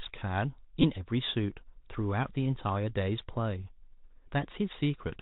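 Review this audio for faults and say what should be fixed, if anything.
The whole clip sounds boxed-in and telephone-like, with no content above 4 kHz, scratchy s sounds, harsh edges on loud high-pitched passages, and a grainy hiss beneath the speech. This is Bluetooth CVSD headset codec damage, and it is plainly audible. CVSD sends a single up-or-down bit per sample, which fits a 64 kbit/s stream, and adapts its step size as it goes. Fast, loud high-frequency movement outruns that step and distorts. To prevent it, record through a wired microphone or a Bluetooth link running a wideband codec rather than the narrowband headset profile.

From 0.82 to 0.85 s there is a short, rough buzz near 267 Hz. This is a Bluetooth headset packet repeated fault. About 15 ms of audio went missing, which points to roughly four lost packets between headset and phone. The chip filled the gap by decoding the previous packet's bits again, and that repetition every 3.75 ms produces the buzz until good packets arrive. 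To prevent it, keep the headset close to the phone and away from interference, so packets are not dropped.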